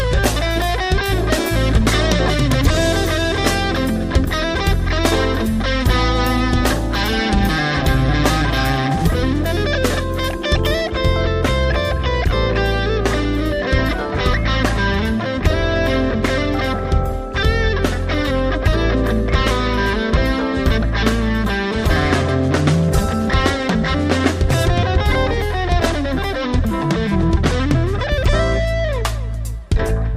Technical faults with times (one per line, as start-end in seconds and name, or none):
0.00-10.90 pre-emphasis left on